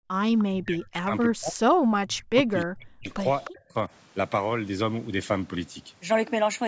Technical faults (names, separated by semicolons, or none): background gated by the echo canceller; echo leak; speech suppressed in double talk